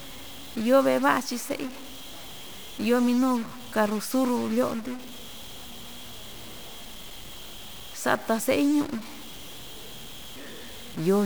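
From start to finish the speech carries a harsh, buzzy grit, and the pauses fill with a hiss of noise instead of going quiet. That points to a stuck bit, likely a data line or converter bit frozen, shifting about half the samples by a step of around -35 dBFS.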